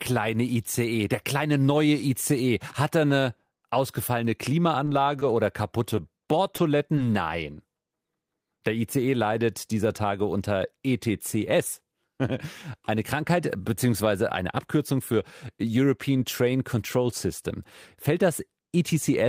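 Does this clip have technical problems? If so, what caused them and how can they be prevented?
Yes. Short stalls from a late packet at 4.85 to 4.89 s, just after "er eine ausgefallene", and at 5.19 to 5.23 s: the jitter buffer ran empty, so the receiver held the last sound for about 20 ms and the delay grew by 20 ms. Nothing is lost, but each sound lingers briefly. A deeper or adaptive jitter buffer on the receiving side would absorb these late arrivals.

Short concealed packet loss at 5.95 to 5.99 s and 6.56 to 6.60 s: 20 ms of audio never reached the decoder, and the receiver extended the preceding sound to fill the gap, leaving a quick smear or wobble. Forward error correction or redundant packets, along with a less congested network path, would reduce these losses.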